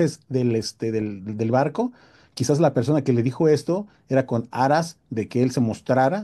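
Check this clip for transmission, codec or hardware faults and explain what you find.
Nothing wrong can be heard anywhere in this recording.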